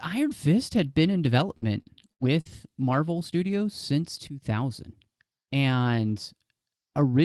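Between 1.57 and 2.47 s, the call's packet stream lost or delayed audio four separate times, with the longest hole lasting 90 ms. The jitter buffer filled each hole by stretching the last decoded sound. Across the stretch about 220 ms went missing, so roughly a quarter of the span is concealment. That is repeated packet loss (robotic sound). It comes out choppy, with pieces dropping out.

From 4.27 to 4.42 s there is a sudden gain jump. The level falls by about 12 dB at once, with no fade, and the speech and the background noise drop together. Most likely a digital gain setting was applied in a single step rather than ramped, which is why the change sounds like an abrupt switch. Meanwhile the Opus call path keeps its band limit near 12 kHz throughout.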